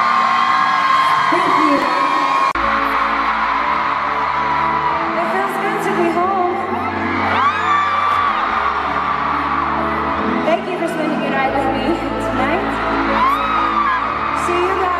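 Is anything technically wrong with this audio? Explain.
Yes. Chunks out of order occur at 1.78 to 1.84 s and at 8.12 to 8.16 s. A late chunk, consistent with 20 ms blocks, plays after its successors, causing brief jumbled moments.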